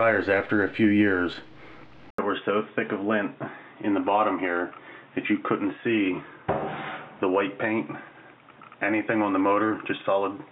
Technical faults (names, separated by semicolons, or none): input switched to a poorer device